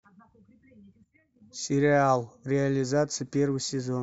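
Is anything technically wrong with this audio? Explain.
No, nothing is technically wrong with this audio.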